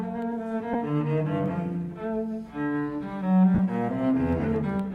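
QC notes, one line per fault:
0.73–0.75 s and 3.55–3.59 s, lost LE Audio frames: two short dropouts, about 15 ms and then 45 ms, which fits a couple and then about six 7.5 ms frames. The LC3 decoder fills each gap by replaying the last spectrum with scrambled phase, so the sound turns briefly into a noisy smear, longer on the second dropout.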